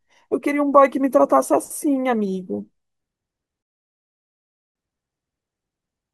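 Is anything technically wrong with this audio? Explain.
Yes. From 3.63 to 4.75 s the speech drops into silence, then picks up exactly where it left off, with nothing skipped. This is a rebuffering stall: playback drained its downloaded audio and waited for more data, inserting about 1.13 s of dead time.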